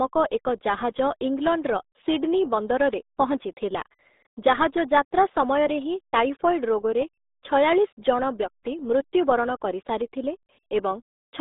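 Throughout, the speech carries RealAudio 14.4 codec damage. Nothing passes above about 3.8 kHz. Heavy coding leaves it muffled and gargly, which fits an 8 kbit/s dial-up stream.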